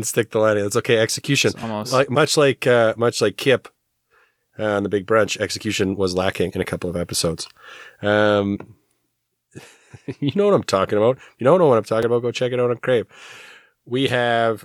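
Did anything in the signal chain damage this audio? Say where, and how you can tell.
Yes. Compressed frames skipped at the decoding stage: at 1.62 s, 6.49–6.51 s and 8.55–8.57 s the speech jumps ahead by roughly 50, 70 and 50 ms, two or three frames each time. On a spectrogram, harmonic tracks break and resume misaligned.

A block of digital silence in the driver or buffer stage at 12.03 s: output drops to silence for 4.35 ms, likely an output buffer not filled in time. The abrupt cut and return give a tick. The waveform shows a flat line, and the spectrogram shows a thin blank column edged by broadband vertical clicks.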